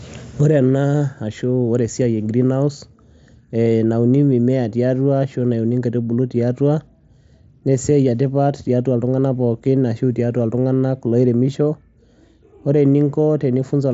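Speech, with no technical fault anywhere in the clip. It comes through a Bluetooth mSBC headset codec, which leaves nothing above about 7.7 kHz and adds only a light coding texture.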